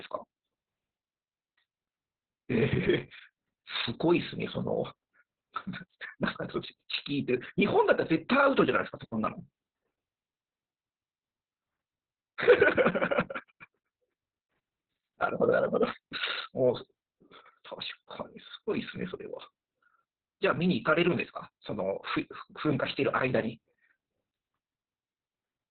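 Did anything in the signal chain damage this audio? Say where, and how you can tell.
Yes, at the codec stage. From start to finish the speech is muffled and hoarse with a faintly robotic edge, and nothing reaches above about 4 kHz. That is heavy Opus voice compression in its SILK linear-prediction mode, squeezed to narrowband. The coarse, grainy excitation and the band cut point to a very low bitrate, around 6 kbps, with long frames of about 60 ms.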